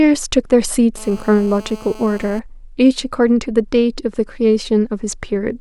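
From 0.97 s to 2.40 s a GSM phone buzz sits under the speech: a hard, raspy tone at about 217 Hz, rich in harmonics, roughly 22 dB below the speech and steady throughout. A 2G handset close to the audio circuitry was transmitting in bursts 217 times a second. The circuit rectified those radio pulses into a square-ish audio waveform, and its even level fits a phone on a call.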